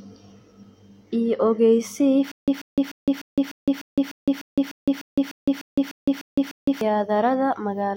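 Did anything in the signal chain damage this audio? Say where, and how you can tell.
Yes. A stutter with silent gaps runs from 2.32 to 6.81 s: a 138 ms burst of speech repeats 15 times, each followed by 162 ms of digital silence, every 300 ms. The likely cause is a stalled playback buffer replaying its last fragment on each retry, losing the speech that should have played.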